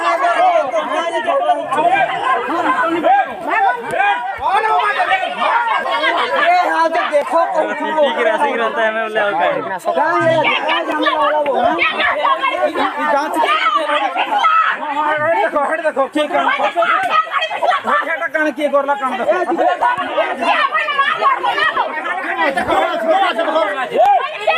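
At 5.84, 7.22, 10.92, 19.82, 21.77 and 24.06 seconds the sound jumps. Each is likely a dropped buffer (overrun). The program fails to read its samples in time and the hardware overwrites them. A short piece is lost, a few milliseconds at most. The two sides then meet directly. No gap of silence is heard. Instead the audio skips forward.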